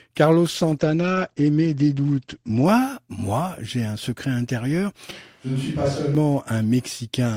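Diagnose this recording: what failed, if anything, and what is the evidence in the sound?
In the call-processing stage, the sender's bandwidth estimate collapsed and the encoder was ordered down to a much lower bitrate. From 0.49 s to 2.71 s the speech turns rough and muffled as the top end closes from 20 kHz to 8 kHz. This fits a drop from about 48 kbps to around 15 kbps. The coarse coding holds at its worst for about 2.2 s before the bitrate recovers and the bandwidth returns.

At the capture stage, the close microphone's feed was lost, and the recording likely fell back to a more distant microphone. From 5.11 s to 6.15 s the speech turns abruptly roomy and hollow and drops about 5 dB in level. Room noise sits roughly 35 dB below the speech. The changeover happens suddenly at both ends, with no crossfade, which points to a source switch rather than anything acoustic in the room.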